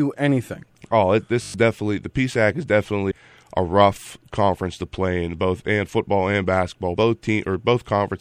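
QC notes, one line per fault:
Throughout: MP3 compression, plainly audible and likely from encoding at around 64 kbps. With bits this short the treble is cut at a fixed frequency and weak spectral lines flicker between frames, so the speech sounds watery and swirly with chirpy sibilants. A spectrogram shows a hard ceiling and speckled holes in the upper bands.
1.42–1.54 s: system hang loop, just before "definitely the". The playback buffer kept cycling while the system froze, so one 20 ms slice repeats six times and gives a buzz at 50 Hz in place of roughly a tenth of a second of speech. The waveform shows identical repeating blocks, and the spectrogram shows harmonic stripes at 50 Hz spacing.
3.10 s and 6.94 s: compressed frames skipped, just before "a rough conference to" and just after "and football and basketball". Whole 26.1 ms frames went unplayed, about 200 ms at the first point and about 70 ms at the second, so the speech jumps ahead. 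Overlapping frames turn each join into a brief smeared blip, not a click. The waveform shows an abrupt change of envelope, and the spectrogram a discontinuity with no vertical click line.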